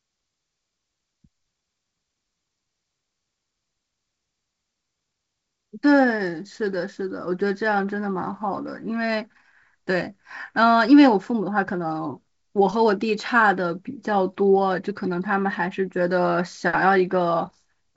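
Nothing is technically wrong with this speech clip, which carries the band-limited sound of G.722 wideband telephone coding at 56 kbit/s with nothing above 7.7 kHz.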